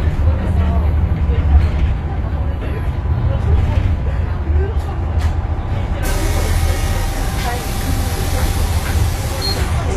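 An everyday-sounds recording with plainly audible HE-AAC compression throughout: the treble sounds synthetic and gritty, nothing is present above 14.9 kHz, and the upper band, likely rebuilt by spectral band replication, no longer lines up harmonically with the lower spectrum, which fits a bitrate around 24 kbps.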